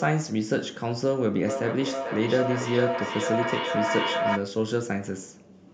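From 1.47 s to 4.52 s there's a feedback howl. A second device in the room picks up what the loudspeaker plays and sends it back louder each trip. It narrows to a tone around 700 Hz that pulses about every 400 ms and peaks at about 2 dB below the speech.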